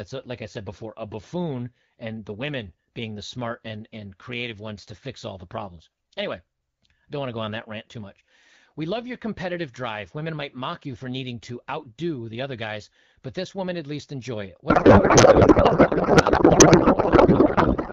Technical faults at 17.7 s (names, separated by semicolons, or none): codec payload misread